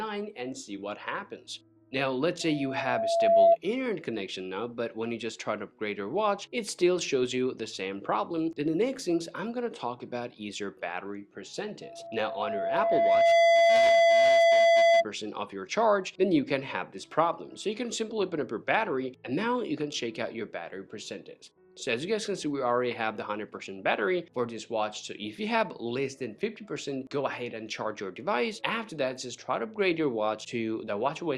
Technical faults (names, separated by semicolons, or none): loudspeaker feedback squeal